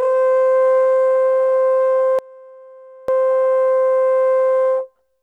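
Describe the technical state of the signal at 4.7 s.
At 4.7 s the music comes through intact, with no dropout, clipping, glitch or other fault to be heard at that point.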